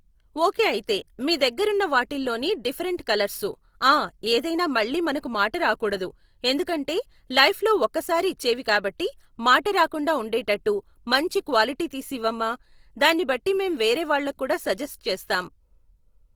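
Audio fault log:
Throughout, Opus compression: the speech has a rough, grainy texture, and voiced tones turn noisy instead of clean. Short of bits, the encoder has filled bands by folding lower ones or with noise rather than leaving holes, so there is little swirl. The damage is plainly audible, yet the band stays full, extending to 20.2 kHz. That points to a likely cause of Opus in its music mode at a low rate, consistent with 24 kbps.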